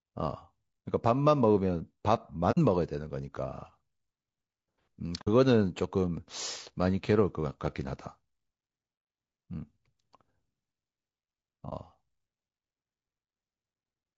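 Throughout, the speech carries plainly audible low-delay AAC compression: a rough, grainy texture with noise between the harmonics, likely from AAC-ELD coding at a rate that fits about 32 kbps.

AAC frame loss with muting occurs at 2.51–2.58 s and 5.21–5.28 s, as 60 ms soft-edged holes, and at 11.69–11.73 s, a 30 ms dip. The decoder zeroed the missing spectrum, and the overlapping windows fade the sound out and back in.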